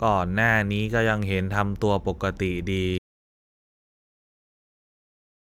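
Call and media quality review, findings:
Audio dropout to silence, 2.98 s to end of clip. Input likely lost (device disconnect, failed link or mute) while recording continued writing silence. Speech cuts off mid-flow into silence, no room tone; remaining content unrecoverable.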